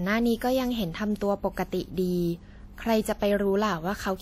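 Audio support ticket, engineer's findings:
Throughout: ringing, washy speech, hiss pumping with level; likely WMA compression, fits 48 kbps. Spectrogram: nothing above 16.2 kHz, weak partials zeroed into holes.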